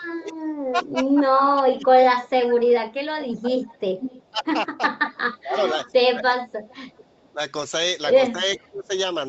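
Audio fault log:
0.19–1.87 s, 3.42–3.62 s, 4.30–4.44 s, 5.00–7.39 s and 8.57–8.91 s: speech suppressed in double talk. With both sides talking at once, the echo canceller was likely unable to separate this talker from the loudspeaker echo, so it attenuated both. The speech dips in pieces: by about 15 dB in the first two spans, about 20 dB at 4.30 s and through 5.00–7.39 s, and nearly 30 dB at 8.57 s. In the two long spans, well under a second of each is actually pulled down.
1.71–4.51 s, 5.10–5.93 s and 6.73–7.29 s: echo leak. The far end's echo canceller likely failed to remove everything its microphone caught from its loudspeaker, and the remainder was sent back. A delayed copy of the speech follows the original by 382 ms in the first span, where it sits only about 10 dB below the speech. In the later spans the delay is 441 ms, and the echo falls to roughly 25 and 30 dB down.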